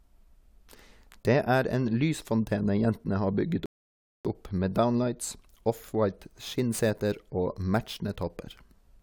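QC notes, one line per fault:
3.66–4.25 s, rebuffering stall: playback halts to silence after "lysfontene jentene har bygget" and picks up cleanly with "opp med downlights". The player drained its downloaded audio and waited for more, so nothing is missing but about 0.59 s of dead air is inserted.
6.06 s to end, sample clock jitter: a fine hiss or grit rides on the speech, strongest on loud and bright passages and absent in pauses. The converter clock wanders by roughly 10 µs, and since timing error scales with waveform slope, the noise sits about 25 dB under the signal.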